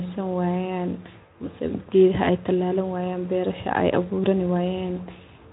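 There are no technical faults in this speech clip to describe in time order, so there is no when, what, cause or sound of any fault to report.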